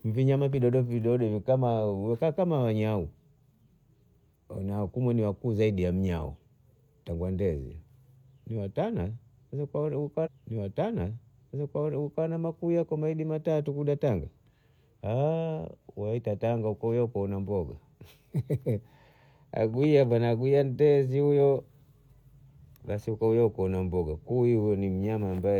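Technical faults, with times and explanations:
10.22–12.22 s: stream segment repeated. About 2.0 s of the speech plays a second time, because the player queued that segment twice, leaving a small blip at the jump back.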